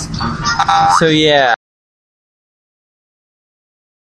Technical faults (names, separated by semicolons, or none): audio dropout to silence